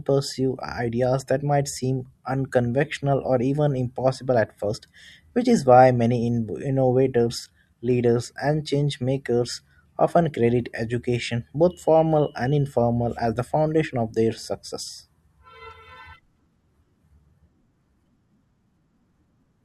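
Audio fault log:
No faults are heard in this speech recording. Nothing in it calls for a timed entry.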